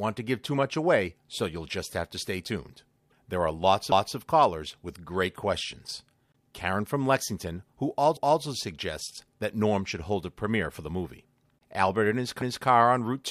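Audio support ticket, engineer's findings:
Stutter with a quarter-second repeat at each join: 3.92–4.17 s, 8.17–8.42 s, 12.42–12.67 s. Overlapping chunks: the chunking stage starts each 4 s block 250 ms before the previous one ends, so that slice plays twice. Check the chunking and overlap-add logic in the buffering or streaming layer.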